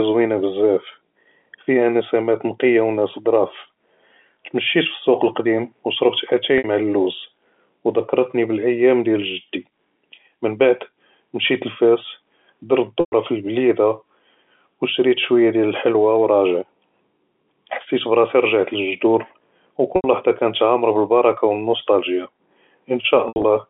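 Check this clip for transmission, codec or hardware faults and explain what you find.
Four short dropouts show packet loss with pitch repetition. They occur at 6.58 to 6.64 s, 13.00 to 13.12 s (just before "פי אלבלידה"), 19.96 to 20.04 s, and 23.28 to 23.44 s. The last is scattered, with its longest gap 80 ms. Gaps run 60 to 120 ms, which fits 20 ms packets. The receiver fills each gap by repeating the last pitch period. The shorter ones sound like a held, buzzy tone. The 120 ms gaps fade toward silence before the speech cross-fades back in. The band-limited G.711 line sound is clear throughout.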